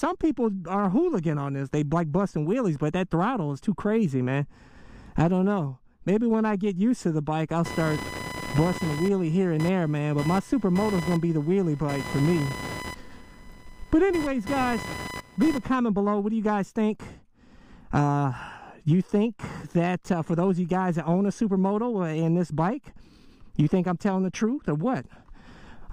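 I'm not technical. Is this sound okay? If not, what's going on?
No. From about 7.65 to 15.65 seconds, a fairly loud, high-pitched buzzing chirp sits on top of the sound, pulsing around a thousand times a second. This is computer activity noise. When the computer's processor, graphics card or mouse suddenly works harder, it disturbs the electrical ground that the audio circuit shares. That disturbance leaks into the recording, so the buzz follows what the computer is doing, not the sound itself.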